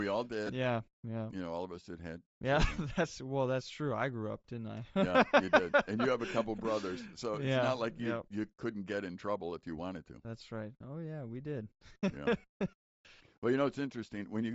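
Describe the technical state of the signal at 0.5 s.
Around 0.5 s there is a dropout from lost LE Audio frames, spanning 0.47 to 0.49 s, just before "yeah yeah you know". About 20 ms of audio went missing, which fits two 10 ms frames. The decoder filled the gap by reusing the last spectrum with randomised signs. The short hole becomes a brief noisy smear rather than silence. The speech loses its clarity for an instant, then returns.

Underneath, the whole clip carries Bluetooth LC3 compression damage, and it is plainly audible here. The speech has a breathy, grainy edge. The upper spectrum sounds thinned and partly replaced by noise. This is likely the result of LC3 coding at a low rate. The sound fits roughly 32 kbps, where the codec discards much high-frequency detail and substitutes noise fill.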